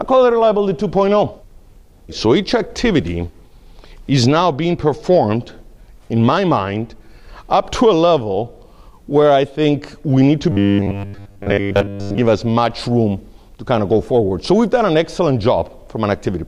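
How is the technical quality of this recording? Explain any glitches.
The recording has one clear glitch, a stretch of robotic sound from repeated short buffers between 10.52 and 12.18 s. The likely cause is new audio arriving too slowly, so the playback software kept filling the gap by looping a short slice, about 10 ms long, while roughly two thirds or more of the real signal was dropped. Repeating a 10 ms slice imposes a fixed 100 Hz pitch, so for that stretch the sound turns into a stiff, metallic buzz that only loosely tracks the original.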